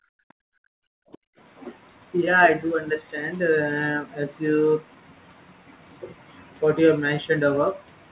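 From 0.00 to 0.19 s the room sound behind the speech drops out sharply, by about 40 dB, then returns. This is background gated by the echo canceller: while the loudspeaker was active, the canceller pulled the microphone down hard and released it once playback eased.

At 0.47 to 0.51 s the talker's own speech briefly collapses in a deep, very short dip. This is most likely speech suppressed in double talk: with both sides talking, the canceller could not separate the near voice from echo and attenuated both.

From 0.79 to 1.38 s the background gates out again, by about 40 dB, for roughly half a second, as the echo canceller clamps the microphone during far-end playback before letting go.

Inside that stretch, at 1.12 to 1.18 s, a faint scrap of a second voice comes through, well below the talker. This is likely the other side's voice leaking through, loudspeaker output the canceller failed to fully remove from the microphone. 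Throughout, the narrow band with nothing above 4 kHz points to a G.711-style call codec.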